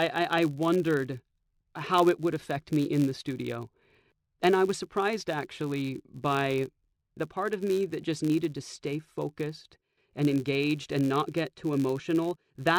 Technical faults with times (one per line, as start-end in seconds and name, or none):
0.00-12.78 filter restarted on every block